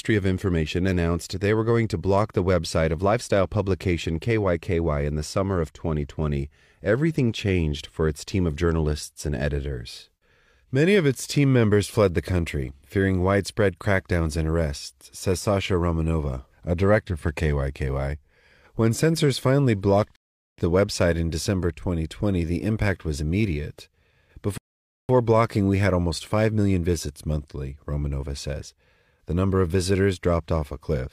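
At 20.16 s the speech halts into silence for about 0.42 s, and at 24.58 s it does so again for about 0.51 s: two rebuffering stalls, where playback ran dry of downloaded audio and waited for more to arrive. What separates these from dropouts is continuity. Each gap is pure added time, and the speech picks up at the exact point it froze, with no syllable missing. A dropout would skip material instead.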